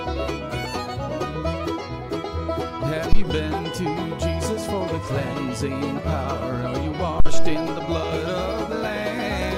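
At 3.13 s there's a phantom power thump, a supply switching on or off on a live input with the step pushed through the coupling capacitors as a deep low thud peaking at about -4 dBFS. It dies in roughly 30 ms. A second, slower one hits at 7.20 s, decaying over about 105 ms.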